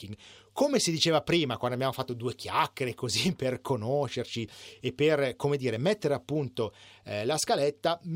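Nothing in this recording of speech stands out as a technical fault, so there's nothing to place on a timeline here.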